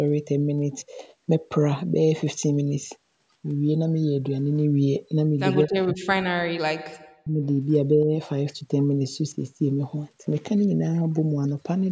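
Speech suppressed in double talk at 5.65 to 6.72 s and 7.22 to 7.41 s in this speech clip: the talker drops by roughly 40 dB, likely because an echo canceller muted the talker while the far side spoke.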